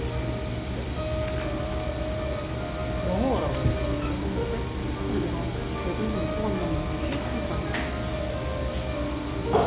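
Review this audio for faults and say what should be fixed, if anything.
Nothing in the signal needs fixing; level, continuity and timing hold steady throughout the sound, with no technical defect to correct.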